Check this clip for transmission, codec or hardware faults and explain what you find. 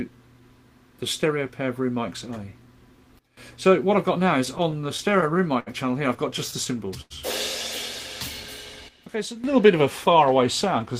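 Yes, the clip has two kinds of fault: two sudden gain jumps and two bursts of repeated stalls (stutter).

Sudden gain jump, 3.19 to 3.37 s and 8.88 to 9.44 s: a digital gain change was likely applied between one sample and the next with no ramp. Sound and background noise drop together by about 16 dB, then about 12 dB.

Repeated stalls (stutter), 4.45 to 5.68 s and 6.38 to 7.12 s: packets arrived late, repeatedly draining the jitter buffer, so the receiver extended the last sound, with 9 gaps (longest 67 ms) and 6 gaps (longest 92 ms). Nothing is lost, but the sound drags and stutters.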